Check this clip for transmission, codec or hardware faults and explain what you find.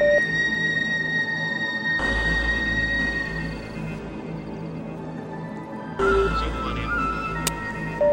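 One codec fault shows up in this music clip. At 5.17 s a corrupt frame decoded: damaged bits misplace energy for roughly one frame, giving a faint chirp, squeak, blip or burst of noise near -40 dBFS, seen as a brief, misplaced vertical smear on the spectrogram.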